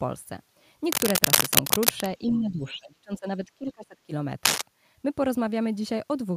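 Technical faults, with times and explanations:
0.84–2.1 s, cable scratch noise: a worn cable or connector being moved likely makes its contact resistance jump about, throwing dense, uneven noise bursts onto the line, heard as a scratchy rustle riding roughly 5 dB above the speech.
2.31–3.26 s, speech suppressed in double talk: the echo canceller likely couldn't separate the near talker from the far side's echo and turned both down, so for much of this stretch the speech dips by up to about 30 dB.
3.45–4.12 s, speech suppressed in double talk: the same canceller likely clamps down again while both sides talk, and the speech drops, up to about 25 dB, over roughly 60 percent of the span.
4.45–4.62 s, cable scratch noise: a brief disturbance at a worn contact is the likely cause, adding a short, ragged scratch about 5 dB above the speech.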